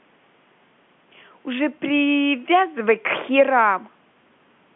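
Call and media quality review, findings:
No findings in this call and media quality review; the speech carries the narrow telephone band expected of the call path.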